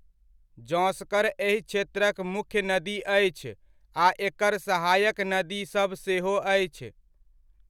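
Listening to the speech recording, nothing stood out as technically wrong anywhere in it.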